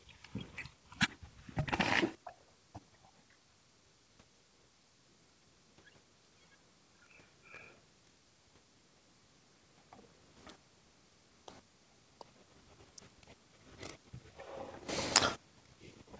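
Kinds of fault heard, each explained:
No technical faults can be heard in this speech recording.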